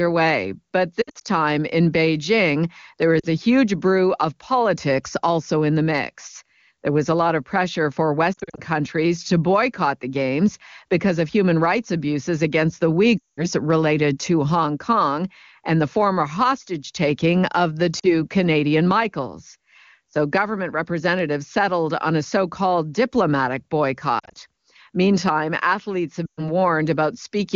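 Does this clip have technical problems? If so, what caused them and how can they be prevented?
Yes. There are lost AMR speech frames at 1.01–1.22, 3.19–3.26, 8.34–8.60 (after "lot of pressure for"), 13.18–13.46, 17.99–18.09 (after "hostage taking of the"), 24.19–24.38 and 26.25–26.51 s (after "athletes have"). Radio errors corrupted frames, so the decoder smeared and faded the audio in those gaps. Better radio coverage or stronger channel coding would prevent this.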